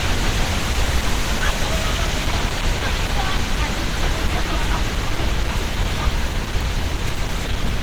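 Throughout, content stops near 20.1 kHz, yet the coarse coding texture points to low-bitrate audio saved at a high bitrate, likely a heavily compressed source re-encoded as MP3.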